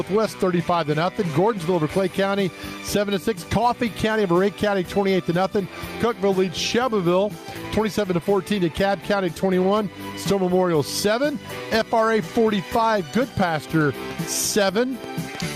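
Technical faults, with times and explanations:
Throughout, gain pumping: the gain ducks under each loud sound, with the level swinging by around 10 dB, so loud and soft passages sit unnaturally close and everything feels squashed. The likely cause is input gain set far too high, with a fast limiter clamping each peak. On the waveform, peaks are flattened to a near-constant ceiling; on a spectrogram, the level darkens under each loud event.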